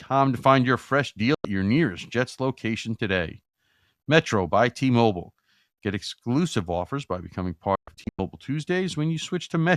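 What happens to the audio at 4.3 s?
Nothing goes wrong at 4.3 s; the speech there plays through intact, with no dropout, click, distortion or other fault.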